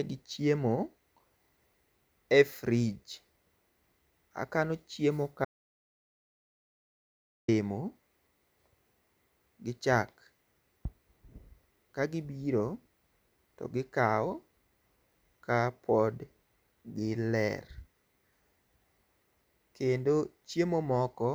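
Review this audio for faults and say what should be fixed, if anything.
An audio dropout to silence runs from 5.45 s to 7.48 s, removing about 2.03 s of speech. The input was likely lost through a disconnect or mute while recording continued, writing silence. The waveform shows a dead-flat line and the spectrogram a fully black band, with no room tone. Secure connections and monitor input levels during capture, then re-record the missing passage.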